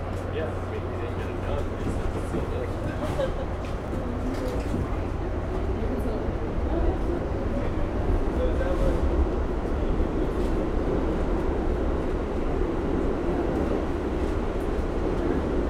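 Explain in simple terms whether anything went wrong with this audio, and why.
Five short clicks interrupt the sound, at 3.88, 4.92, 8.37, 9.70 and 13.67 seconds. These are dropped samples: each time, a tiny sliver of the recording, a small fraction of a millisecond, went missing, most likely because the recording or playback system briefly failed to keep up. The sound jumps abruptly to a later point, and that sudden step in the signal is heard as a sharp click, though nothing audible is actually lost.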